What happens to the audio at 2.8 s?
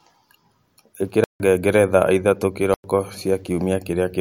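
At that point the playback chain delivered a block of digital silence: from 2.74 s to 2.84 s, about 100 ms of samples came out as silence instead of audio. The speech cuts off abruptly at 2.74 s and resumes just as abruptly at 2.84 s, with no fade on either side. The 100 ms between those hard edges is a short, dead hole in the speech.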